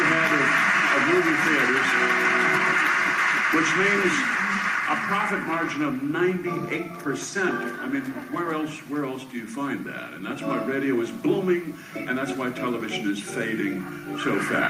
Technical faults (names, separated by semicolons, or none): gain pumping